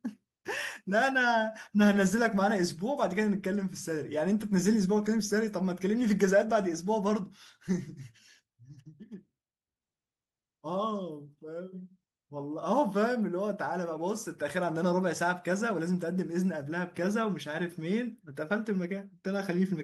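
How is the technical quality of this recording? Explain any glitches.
Nothing in the recording stood out as a technical problem on listening, so there are no glitches to explain.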